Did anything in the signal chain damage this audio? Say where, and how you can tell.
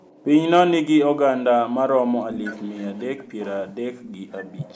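Yes. The damage most likely comes from the call's echo canceller, where speech suppressed in double talk cuts into the talker at 0.57–0.98 s, 1.37–2.11 s, 3.16–3.21 s and 3.66–4.68 s. Dips reach roughly 40 dB in the first two, about 10 dB in the brief one and about 30 dB in the last. On a waveform, the envelope collapses in chunks mid-phrase. A spectrogram shows vertical gaps or faded bands, with the high end vanishing.

The same processing lets through an echo leak at 2.3–3.66 s and 4.0–4.49 s, a copy of the speech trailing 240 ms behind, roughly 15 dB and then 25 dB below the direct sound. The spectrogram shows faint duplicate harmonic traces shifted right by that delay, and the waveform shows small ghost bursts trailing the speech. The canceller likely failed to fully subtract the loudspeaker pickup before sending it back. The band stops at 8 kHz, as the call's microphone processing leaves it.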